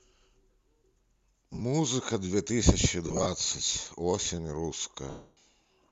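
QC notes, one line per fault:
1.53–1.62 s, 3.08–3.26 s, 5.10–5.35 s, lost LE Audio frames: the decoder repeats the last spectrum with scrambled signs, so the first two scattered gaps come out as brief noisy smears, and the solid 270 ms loss smears, then fades toward silence. The step sizes fit 10 ms frames, likely from the LC3 link.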